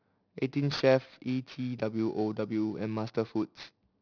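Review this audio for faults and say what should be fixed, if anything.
Aliasing runs through the whole speech clip. The sound points to a resample from 16 kHz to 11 kHz with no anti-aliasing filter, so energy above 5.5 kHz folds back as unrelated tones, roughly 20 dB below the speech. Sibilants turn gritty and metallic. Plain band-limiting would only dull them. Applying a low-pass filter below 5.5 kHz before resampling prevents it.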